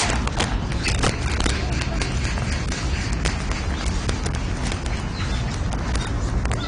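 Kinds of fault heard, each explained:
Integer overflow: The signal was driven about 8 dB past the largest value the integer format holds, and instead of being limited those samples wrapped to the opposite sign. Only a tiny fraction, around half a percent, exceed the limit, but each one jumps across the full range, so the loudest moments crack violently and far more harshly than clipping would.
AAC compression: A lossy codec likely discarded and coarsely quantised much of the spectrum, most likely AAC-LC at a bitrate around 32 kbps. Nothing is present above 10.1 kHz, so the top end sounds dull, and the coding damage is plainly audible as smearing and a warbling, fizzy texture on sustained sound.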